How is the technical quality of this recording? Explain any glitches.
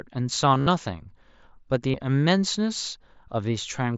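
The recording has two brief glitches from concealed Bluetooth headset packet loss. At 0.55 to 0.67 s, lost packets are patched by repeating recent waveform. Runs up to 45 ms give a buzzy held tone. At 1.91 to 1.94 s, a 30 ms gap is similarly filled and briefly warbles. The speech passes through an mSBC wideband headset codec, which caps the audio at 8 kHz and leaves light graininess.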